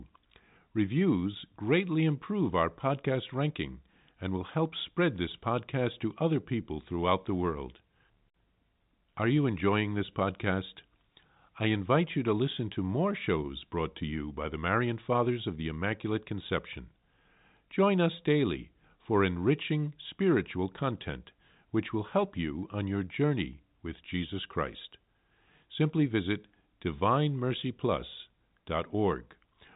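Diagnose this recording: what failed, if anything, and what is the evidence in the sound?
Nothing failed; ordinary telephone-band speech, no fault audible.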